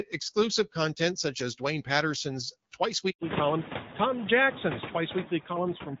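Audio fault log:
Throughout: noise suppressor artifacts. The suppressor treats steady background noise as something to remove. It cuts each noise-dominated band, frame by frame, by about 10 dB. So the noise drops in the pauses and swells back under the speech. The leftover noise flutters and warbles as bands switch on and off. Room noise climbs near 3 s, by about 18 dB, and sits about 14 dB below the speech, so the pumping gets stronger there.
3.10 to 3.20 s: handover gap. The call moves from one network link to another. No speech frames arrive while the switch happens. The speech fades out quickly and leaves a silence of 100 ms. Then the new link picks up. Whatever was said in that tenth of a second is gone, not masked. The hole is clean. There is no noise fill, because nothing was decoded.
3.20 to 6.0 s: fallback to narrowband. After the handover the call leaves HD Voice. Before it, the band reaches past 6 kHz with light codec coloring, which fits AMR-WB at about 12.65 kbit/s. 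After it, nothing remains above 4 kHz, which points to AMR-NB at about 12.2 kbit/s. Sibilants and breathiness lose their top. The speech sounds duller, boxier and rougher for the rest of the clip.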